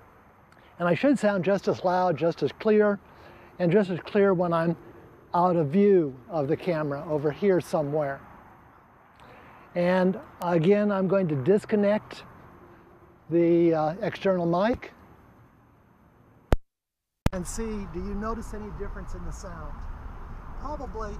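At 10.42 s and again at 14.17 s, a bit error spike appears: one sample whose value jumped by a power of two, reaching about -13 dBFS and then about -31 dBFS. Each is heard as a single sharp tick, shows as a one-sample needle on the waveform, and forms a thin vertical line across the whole spectrogram.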